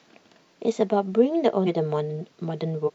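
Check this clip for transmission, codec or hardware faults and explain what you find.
The clip has one kind of fault, damaged data in a compressed stream, at two places. The first runs from 1.63 to 1.68 s. The second runs from 2.84 to 2.90 s. Corrupted bytes make the decoder misread frames and lose sync. It then hunts for the next valid frame header. Each event is heard as a brief chirp, squawk, click or short hole in the speech.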